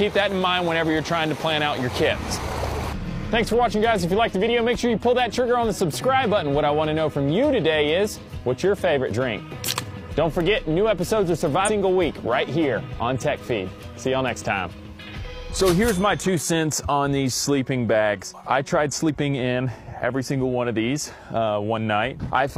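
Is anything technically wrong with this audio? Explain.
Yes, there are two kinds of fault. At 9.11 s and 19.09 s there are brief skips, which suggest audio missing between chunks. The gaps fall 10 s apart, which points to a likely cause of fixed-length chunks. About a fiftieth of a second vanishes at each join. The two sides butt together with no silence, so the sound jumps.

At 11.64 to 11.70 s and 14.66 to 14.71 s there are short blips from damaged data in a compressed stream. Corrupted frames confuse the decoder. It loses sync and hunts for the next valid frame.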